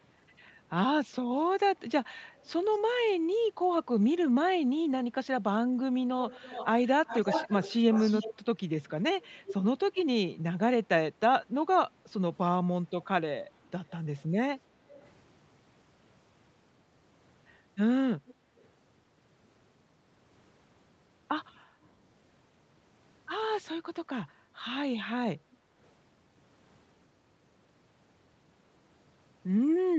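An echo canceller on the far end likely let its loudspeaker pickup through, causing echo leak: a delayed copy of the speech, about 0.27 s late at 2.17–2.78 s and about 0.34 s late at 6.27–8.39, 9.23–9.55, 13.52–14.22, 14.89–15.08, 18.26–18.34 and 25.52–25.57 s. It is faint at some points and clearly audible at 6.27–8.39 and 9.23–9.55 s.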